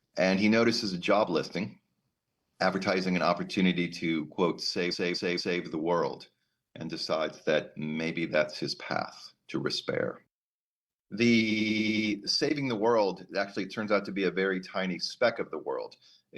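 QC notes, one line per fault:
4.90–5.60 s, repeated frames. A 232 ms block plays three extra times, which fits a run of five compressed frames. It stutters and adds 0.70 s.
11.50–12.05 s, repeated frames. A 93 ms block plays six extra times, which points to two frames resent. The repeats give a rapid stutter and add 0.56 s.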